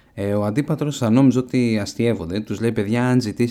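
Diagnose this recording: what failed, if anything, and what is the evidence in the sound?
No fault can be heard.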